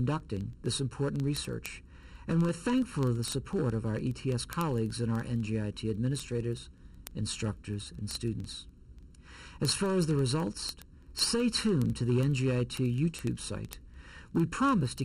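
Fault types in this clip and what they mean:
Channel delay (comb filtering): one channel trails the other by under a millisecond, so the mono sum has fixed notches from around 700 Hz upward, unlike a phaser's moving sweep.
Word clock ticks: single-sample slips from an unlocked clock, about 25 per second from 0.12 to 15.02 s, evenly spaced unlike random crackle, suggesting a mismatch of several hundred ppm.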